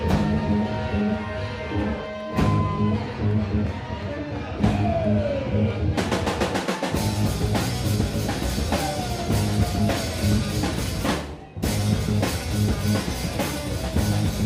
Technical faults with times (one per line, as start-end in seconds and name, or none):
none